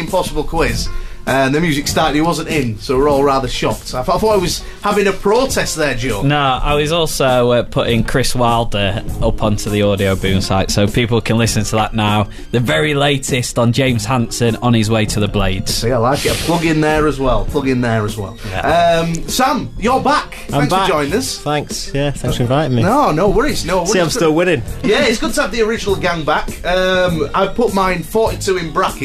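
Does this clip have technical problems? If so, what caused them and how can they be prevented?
No technical faults are audible.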